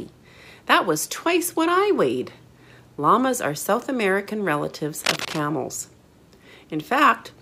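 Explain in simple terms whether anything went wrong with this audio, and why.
From about 4.98 to 5.41 seconds, a rough scratching, crackling burst of noise cuts across the sound, almost as loud as the sound itself, and then stops. This is cable scratch noise. The likely cause is a worn cable, plug or control that was moved or bumped. Its loose metal contact kept connecting and disconnecting very quickly, and each flicker added a tiny jolt of noise. Many of these jolts close together produce that scratchy rustle.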